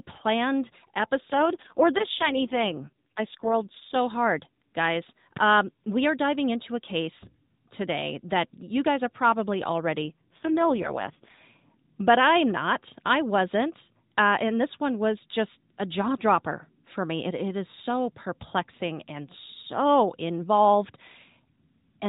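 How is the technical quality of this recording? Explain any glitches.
This telephone-band speech has two AMR rate drops. From 1.32 to 3.96 s, ending just before "hard guys", and from 10.02 to 11.43 s, between "you guys are probably" and "but I'm not I", the voice turns buzzy and synthetic, which fits the codec stepping down from 12.2 to 4.75 kbps. With fewer bits, its few pulses per subframe model the voice crudely. Unlike packet loss, there is no gap, and unlike a bandwidth drop, the narrowband ceiling stays at 4 kHz throughout.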